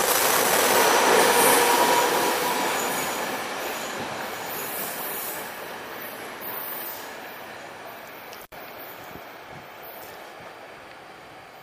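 At 8.41 s the sound drops out abruptly, with a crackle at each edge and only faint hiss filling the gap, recovering by 8.56 s. This is an intermittent contact: a loose cable or plug briefly lost connection, leaving the line open for about 69 ms.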